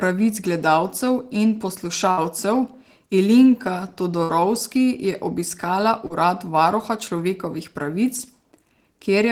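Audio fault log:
2.11 to 2.20 s and 4.23 to 4.41 s, burst of packet loss: about 40 ms of audio goes missing, and the receiver stretches the last sound for roughly 56 to 58 ms while fading it, then jumps ahead.
6.07 to 6.13 s, short concealed packet loss: a 40 ms hole is patched with about 31 ms of continued sound, leaving a brief smear before it blends back.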